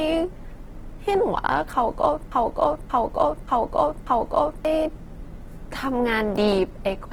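Throughout, the speech sounds grainy, rough and noisy while still reaching up to about 20.2 kHz, the plainly audible damage of likely Opus compression in its music mode, consistent with roughly 16 kbps. From 2.32 to 4.65 s, a 0.58-second fragment repeats back to back four times in a broken-record loop, likely a stalled stream resending its last fragment while the intended audio is lost.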